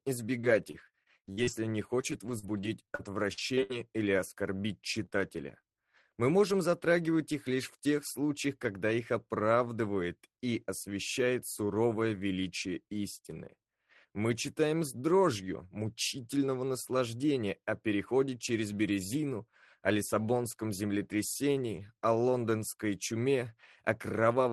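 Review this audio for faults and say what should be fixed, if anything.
Repeated packet loss (robotic sound) runs from 0.41 to 1.53 s and again from 2.01 to 3.71 s, with eight and nine holes respectively, the longest 58 ms and 65 ms. Each hole is patched by extending the previous sound, about a fifth of a second in total per stretch, so the audio turns choppy. A spectrogram shows frozen, smeared harmonic bands between real frames. The waveform shows copied cycles that decay and then snap back. Prevention: give the jitter buffer more headroom and reduce bursty loss on the network path.

Short concealed packet loss occurs at 5.05 to 5.13 s, two consecutive 20 ms holes, and at 5.61 to 5.65 s. The decoder continued the last sound briefly and blended back, which produces a quick smear or wobble. On a spectrogram this appears as a narrow vertical patch of blurred, overly smooth energy. In the waveform, a short repeated or fading segment is followed by a crossfade. 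Prevention: enable forward error correction so isolated losses can be recovered instead of guessed.

A lost packet rebuilt from error correction sits at 5.49 s. Here the following packet carried a low-bitrate copy, so there is no gap, but that 20 ms frame sounds rougher and noisier. A spectrogram shows a thin column of grainier texture below the 12 kHz ceiling, and the waveform looks slightly coarser there. Prevention: raise the FEC bitrate share or reduce loss on the path so fewer frames depend on the backup copy.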